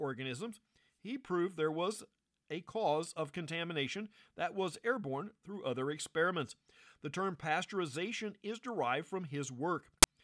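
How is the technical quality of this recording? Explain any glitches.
The recording has one clear glitch, near the end of the clip. At about 10.03 s there is a very short burst of very loud static with abrupt edges, the signature of file tags played as audio. A block of metadata, here the compressed data of an embedded cover picture, has been read by the player as if it were sample values. Because compressed bytes are essentially random, they decode to very loud white noise, heard as a sharp, harsh click-like crack.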